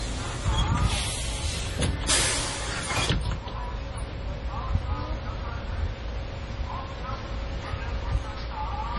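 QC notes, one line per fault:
Throughout: low-bitrate audio saved at a high bitrate. Nothing is heard above about 11.4 kHz, so the top end sounds dull, and the artefacts of the first encoding remain. This fits a likely 32 kbit/s MP3 re-encoded at 320 kbit/s. The second pass cannot restore what the first discarded.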